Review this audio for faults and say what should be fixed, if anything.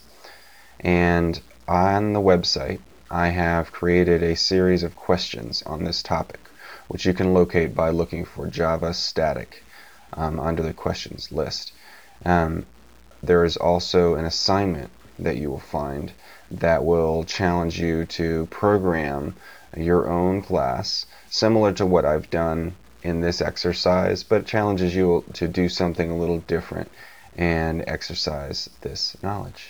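Grainy distortion that moves with the sound runs through the whole clip. Quiet passages turn gritty and the softest parts sputter or collapse to silence. This is likely low bit depth without dither. The sound fits 8-bit truncation, with error roughly 35 dB below the signal. Because truncation makes the error track the waveform, it is heard as distortion rather than as steady noise. To prevent it, keep a high working resolution and apply dither whenever word length is reduced.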